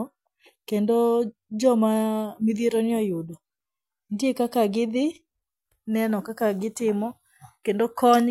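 Nothing stood out on listening to the speech here; no technical fault could be heard anywhere in the recording.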